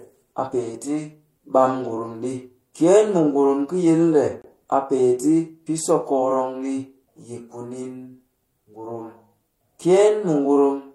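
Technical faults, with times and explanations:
4.42–4.44 s, gap between stream segments: a hole of about 26 ms of hard-edged silence opens where two segments meet, their timestamps leaving a small space the player pads out. Unlike a dropout, nothing is missing; the sound resumes exactly where it stopped, just slightly later.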